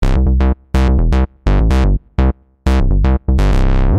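Nothing in this bit of audio trips an alarm; there's no technical fault to point to anywhere along the way.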